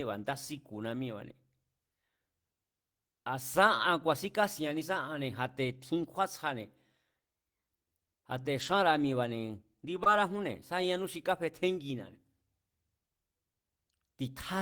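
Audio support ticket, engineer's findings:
Lost packet rebuilt from error correction, 8.57–8.75 s: five separate packets dropped, decoder substituted low-bitrate redundant copies carried in following packets (Opus in-band FEC). No gap, but about 100 ms of rougher, noisier speech. Second instance at 10.05–10.07 s, about 20 ms, fits a single lost frame.

Short concealed packet loss, 10.03–10.07 s: about 20 ms arrived too late for the decoder. Receiver extrapolated the preceding sound to cover the hole, then crossfaded back to real audio. Heard as a brief smear or wobble.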